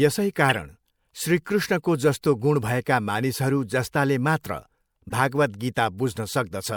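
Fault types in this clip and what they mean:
Corrupt frame decoded: damaged compressed frames were played anyway, misplacing spectral energy. Two brief glitches, near 0.49 s and 5.09 s, the first much louder.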